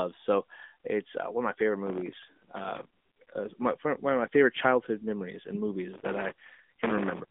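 Throughout, the speech is boxed into a thin telephone band, with nothing above about 3.8 kHz and a plainly buzzy, synthetic edge. That is the AMR narrowband mobile codec, whose vocal-tract model, at a rate that sounds like roughly 10 kbps, keeps only the core of the voice.

From 1.87 to 3.02 s, right after "one of my favorite" and ending before "my one", a gritty crackle tears across the sound. It returns from 5.94 to 7.21 s, after "favorite childhood memories and". This is processor overload crackle: very short buffers, around a millisecond and a half each, miss their deadlines again and again, dozens in the first burst and a couple of hundred in the second. Each miss replays old audio with hard edges.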